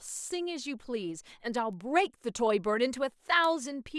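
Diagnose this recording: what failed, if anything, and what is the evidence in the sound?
A bit error spike appears twice in this speech, at 1.73 s and 3.44 s, each one sample wide: a tick at about -40 dBFS, then a sharper one at about -22 dBFS. The fault sits in digital storage or a digital link, where one flipped bit knocks a sample off by a power of two before the next sample returns to normal. On the waveform each is a lone needle; on a spectrogram, a thin full-band vertical line unrelated to the speech.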